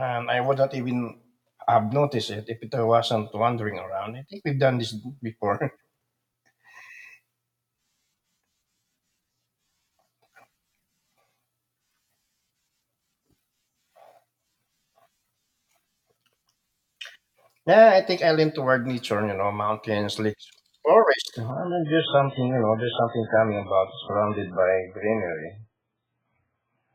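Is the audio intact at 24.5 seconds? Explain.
No. At 24.5 seconds the speech sounds dull and muffled, with nothing above 3.8 kHz, and a watery, synthetic smear of codec artefacts over it. The change arrives abruptly at 21.51 seconds with no gap and lasts to the end of the clip. This is an adaptive stream at a lower bitrate: the player switched to a much lower-bitrate version, and the sound points to something near 8 kbit/s MP3 in place of around 128 kbit/s.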